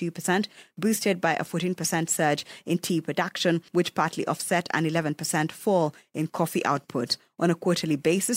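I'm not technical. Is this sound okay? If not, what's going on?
Yes, it sounds fine.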